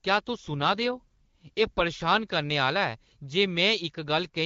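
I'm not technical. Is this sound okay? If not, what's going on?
No. From 0.54 to 1.84 s there is an AMR rate drop: the phone network briefly switched the call's voice coding to a lower quality setting, likely to protect against a weak signal. The speech turns rougher and more synthetic there, then clears back to normal HD Voice.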